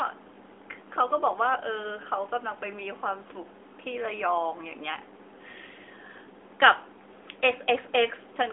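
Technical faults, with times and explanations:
Nothing stood out on listening to the speech, which comes through the narrow band of a mobile phone line.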